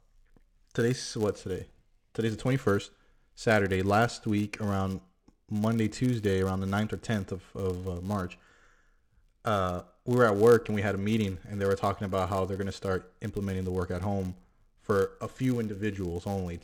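Filter restarted on every block, running through the whole speech recording: a steady 100 Hz buzz rides under the talking, rising and falling with its loudness and dropping away in the pauses. The processing filter appears to lose its memory at each block boundary and begin again from silence, so every block opens with a small transient. Those clicks repeat a hundred times a second, which points to blocks about 10 ms long.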